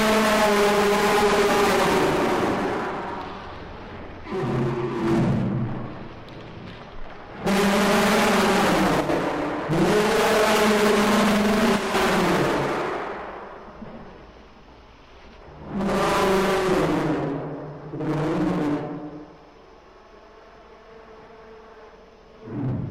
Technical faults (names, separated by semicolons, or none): one channel drops out